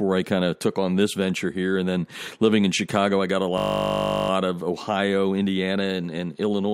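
At 3.58 s, just after "I got a", the speech freezes into a system hang loop. The computer or driver stalled, but the sound hardware kept replaying its ring buffer. A single 20 ms slice repeats exactly, over and over, until 4.3 s. Because the slice is so short, it does not stutter. It becomes a steady 50 Hz buzz lasting about 0.7 s. Then the speech resumes, with little or nothing apparently missing.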